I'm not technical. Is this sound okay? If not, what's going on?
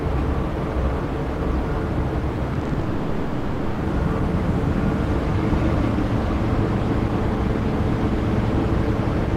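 No, there are two problems right next to each other.

From 2.53 to 2.83 s there's repeated packet loss (robotic sound). Six tiny chunks of audio, none longer than 20 ms, went missing, and each gap was patched by copying the sound just before it. That's about 40% of that stretch, so it comes out choppy.

Right after, from 2.83 to 3.81 s, the sound turns into a smeared, buzzy or hissy continuation of itself for about a second. It never goes fully silent, then the real audio jumps back in with that part gone. That's likely a long network dropout, where the connection stalled and the receiver kept filling the hole.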